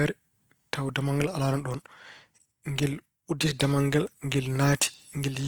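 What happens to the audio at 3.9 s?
At 3.9 s the speech sounds rough and grainy, as it does throughout, likely from Opus compression at a low bitrate near 24 kbps; a spectrogram shows noise-filled bands up to about 20.2 kHz rather than holes.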